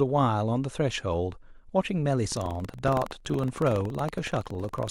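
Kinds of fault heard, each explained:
Buffer tearing: From 2.28 s to the end of the clip, the speech carries a steady robotic rattle at 21.5 Hz, which fits a 2048-sample buffer. The program filling the playback ring buffer and the hardware draining it have drifted out of step, so each period holds a small slice of audio from about a tenth of a second earlier. The hard splices on both sides of that stale slice produce the buzz, which follows the speech and drops away in gaps.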